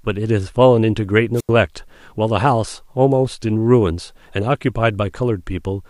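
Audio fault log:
1.35–1.50 s, wireless microphone squelch dropout: the speech is briefly overtaken by a rising burst of hiss, then cut to near silence for about 85 ms before it returns. The transmitter's FM radio signal weakened until the receiver could no longer hold a clean carrier. As the signal faded, demodulated noise swelled, and the squelch circuit then muted the output entirely rather than pass static, reopening only once the signal recovered.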